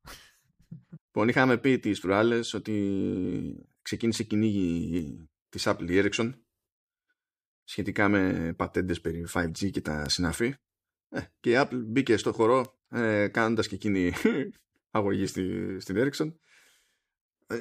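Bit error spikes occur at 4.99 s, 10.06 s and 12.65 s, the last between "μπήκε στο" and "ε κάνοντας και εκείνη". In each, a flipped bit jumps the sample value by a power of two, then it returns. Each is one sharp broadband tick, unrelated to the speech, about -24 dBFS, then about -18 dBFS twice.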